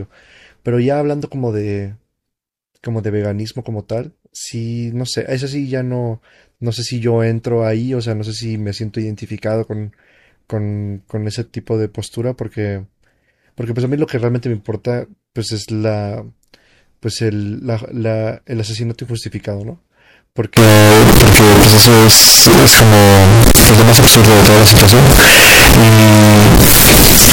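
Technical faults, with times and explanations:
20.57 to 27.33 s, float read as integer: the 32-bit float samples were likely read as 32-bit integers, so sign and exponent bits set each value. The waveform turns nearly square at an almost fixed, high level, very loud and harsh, with background noise as loud as speech, though pitch stays traceable.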